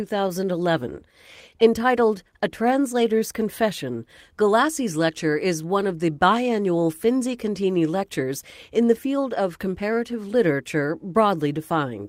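Throughout the speech, clock drift between sender and receiver is present. The sending clock runs roughly 1.5% slower than the receiving one, so the jitter buffer keeps draining and the receiver must stretch the audio to stay in step, which gives a faintly unsteady timing.

From 0.28 s to 11.73 s, repeated timing corrections follow from that drift. The receiver inserts repeated short pieces at uneven intervals, adding something like 150 ms overall and playing the stretch at 99% speed. They come through as slight hiccups and an unsteady tempo.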